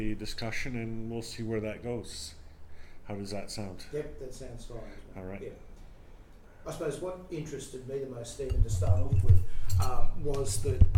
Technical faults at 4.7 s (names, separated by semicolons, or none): none